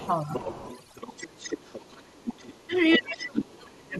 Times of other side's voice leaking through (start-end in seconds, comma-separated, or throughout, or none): 0.02-2.99